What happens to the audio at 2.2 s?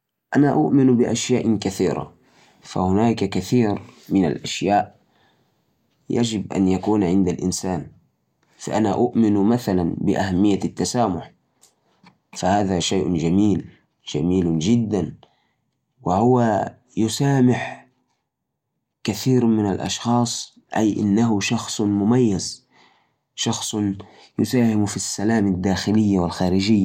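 Nothing goes wrong at 2.2 s; the audio is intact at that point, with no dropout, click or distortion.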